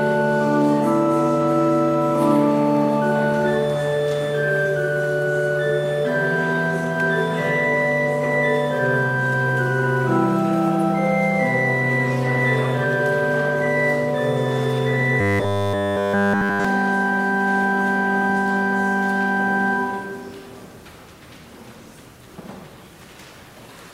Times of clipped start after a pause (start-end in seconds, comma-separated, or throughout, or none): none